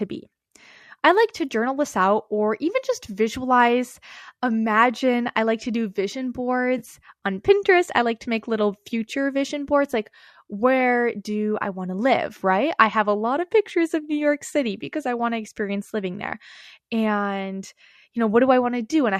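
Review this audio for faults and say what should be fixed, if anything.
AAC frame loss with concealment occurs from 6.78 to 6.82 s. About 30 ms of audio goes missing, which fits three lost frames. The decoder fills the gap from the last good spectrum, so the speech briefly smears into a noisy, phasey patch. Adding forward error correction or a larger jitter buffer on the transmission path would prevent it.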